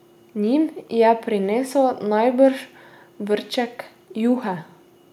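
Nothing in this recording trips any alarm: no dropouts, glitches or distortion turn up anywhere in it.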